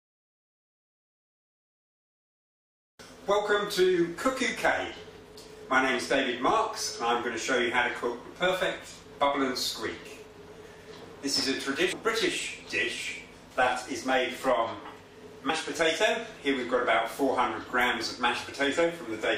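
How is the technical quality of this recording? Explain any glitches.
Two brief glitches interrupt the recording, both from damaged data in a compressed stream: at 11.91 to 11.93 s, and at 15.49 s. Corrupted bytes made the decoder lose frame sync and hunt for the next header, producing short disruptions in the sound.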